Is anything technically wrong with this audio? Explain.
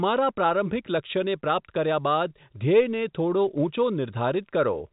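No, nothing is technically wrong with this speech. It carries the band limit of G.711 telephone coding, with nothing above about 3.8 kHz, which fits an ordinary 64 kbps mu-law line.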